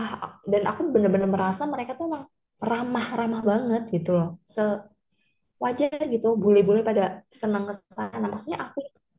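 No technical faults can be heard anywhere in the recording.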